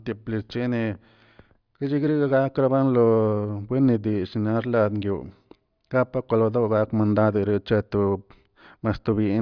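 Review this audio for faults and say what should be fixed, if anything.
Nothing to fix: no faults found in this speech recording.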